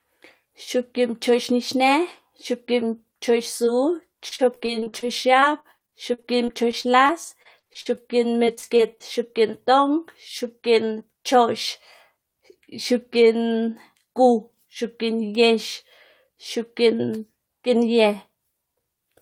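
The speech in this clip has a brief smear at 3.65 to 3.69 s, a tiny wobble where the sound blurs. This is short concealed packet loss: about 20 ms of audio arrived too late for the decoder, so the receiver stretched the preceding sound across the hole and blended back into the real signal. A few moments later the speech turns choppy, with fragments dropping out, from 4.29 to 5.04 s, from 5.40 to 8.07 s, and from 8.45 to 9.31 s. That is repeated packet loss (robotic sound). Gaps kept recurring in quick succession, and each one was patched by extending the last sound. The longest single hole is about 46 ms, in the middle stretch. Concealment covers roughly 28 percent of the first stretch and about 16 to 17 percent of the other two.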